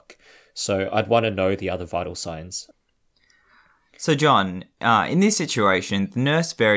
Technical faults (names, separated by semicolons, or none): none